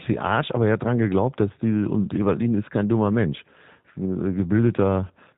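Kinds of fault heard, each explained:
G.729 codec: Speech rebuilt from a vocal tract model and sparse pulses, which fits an 8 kbit/s G.729A stream. Nothing above 4 kHz survives. The voice sounds rough and plainly synthetic throughout.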